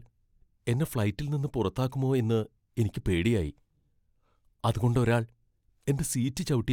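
No technical faults can be heard anywhere in the recording; the signal stays continuous and steady throughout.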